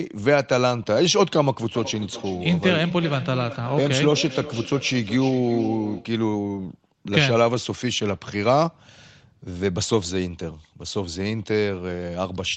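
Speech, and from 1.75 to 6.18 s you get feedback echo between two devices: the talker's audio plays out of a second device in the same room, gets picked up again, and comes back roughly every 0.4 s, thinner and ringier each pass, peaking about 12 dB under the direct speech. The whole thing is band-limited to around 8 kHz, which fits a call codec running at wideband.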